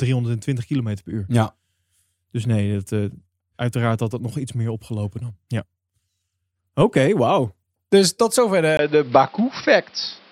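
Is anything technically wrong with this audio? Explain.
Yes. At 8.77 s there's a 20 ms gap, and from there to the end the speech goes dull and boxy, with nothing above 5.7 kHz and a new noise floor about 30 dB down, at the same level. That's likely the input switched to a poorer device, a narrower-band mic taking over mid-recording.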